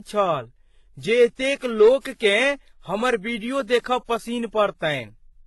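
Transcoding between lossy codecs runs through the whole speech clip. Nothing reaches above 11.8 kHz, and the dull, smeared top end sits under a second layer of grainy, warbling artefacts. The likely cause is that the audio was first encoded very lean, which fits HE-AAC at around 16 kbit/s, and then re-encoded with WMA at a rate near 64 kbit/s. The second encoder spent its bits on the first one's damage and kept its low cut-off.

Hard clipping occurs from 1.12 to 1.24 s and again from 1.81 to 1.89 s. In both spans the signal overran the stage handling it by about 3 dB, so the waveform peaks were sliced flat. Those squared-off tops throw extra harmonics high into the spectrum, heard as a brief harsh crackle on the loudest moments.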